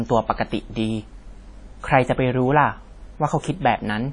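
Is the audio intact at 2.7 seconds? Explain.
No. At 2.7 seconds the speech carries the same damage heard throughout the clip, most likely WMA compression. Its transform blocks smear quantisation noise over tens of milliseconds, so syllables ring and sound washy, with a hiss that swells and fades with the voice, a degree of damage that fits a low bitrate near 32 kbps. Nothing remains above 10 kHz. A plain low-pass filter would dull the top without that breathing, smeared noise.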